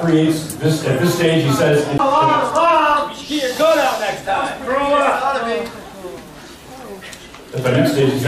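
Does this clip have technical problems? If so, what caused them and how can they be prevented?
Yes. A CD skip occurs at about 1.98 s: a tick and a brief mute of roughly 15 ms, after which playback resumes from a different point because the laser jumped to another turn of the disc's spiral. Prevent it by isolating the player from knocks and using a clean, undamaged disc.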